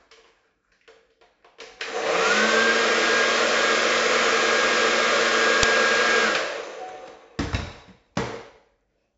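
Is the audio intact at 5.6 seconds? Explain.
No. At 5.63 s there is a burst of about 6 ms from an uninitialised buffer. A block of playback memory was sent out before any audio had been written into it, so leftover data was read as samples. That length fits a 256-sample buffer. It sounds like a sudden, very loud spray of digital noise. A simple click or dropout would be a single tick or a gap. This is a dense, harsh block of garbage that stops as abruptly as it starts.

Under that moment, as across the whole clip, there is heavy 4-bit ADPCM compression. Each sample is stored only as a coarse step from a predicted value, so a gritty hiss rides on every loud sound and rises and falls with its level. Sharp attacks come out distorted. Nothing is present above about 7.7 kHz, and the 64 kbps rate points to 4-bit samples at a 16 kHz rate, which dulls the top end. Perceptual codecs tend to sound swirly or smeared. 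This fault instead sounds like constant grainy noise that follows the level.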